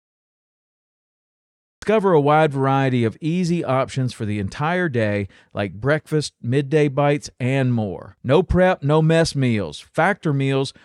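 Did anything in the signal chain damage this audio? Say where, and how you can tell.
Yes, a cut-off start: recording began late, so there's digital silence until 1.82 s, then speech jumps in mid-sound at "a wide variety of".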